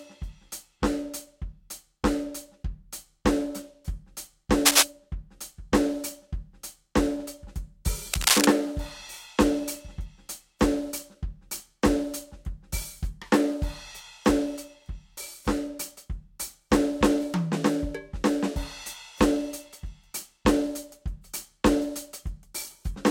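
Music, with two bursts of cable scratch noise: from 4.65 to 4.83 s, roughly 10 dB above the music, and from 8.13 to 8.45 s, roughly 5 dB above it. Each is a dense, uneven rustling that rides over the music for a fraction of a second, not an isolated click or a steady crackle. The likely cause is a worn cable, connector or control carrying DC whose contact resistance jumped around as it was moved.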